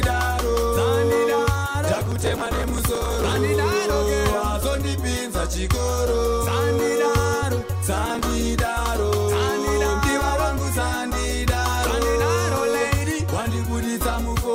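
Processor overload crackle from 1.93 to 3.38 s and again from 8.06 to 8.31 s: tiny buffers, around a millisecond and a half, miss their deadlines and are skipped, leaving gritty, tearing crackle.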